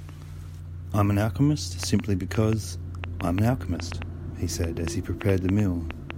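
From 1.83 s to 6.11 s a train of clicks runs over the speech: sharp, similar-shaped pulses arriving at about 4 per second but at an irregular pace, some 20 in all. They stand well clear of the speech, peaking around 15 dB above it, and are heard as ticking that carries straight through the pauses. The likely cause is electrical interference from nearby equipment or a faulty connection or power supply, injecting the same transient repeatedly.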